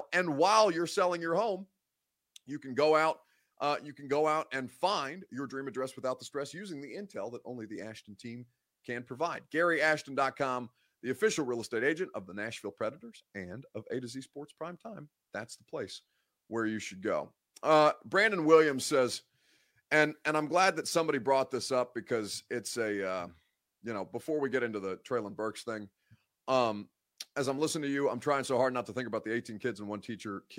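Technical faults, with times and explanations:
No technical faults can be heard in this speech clip.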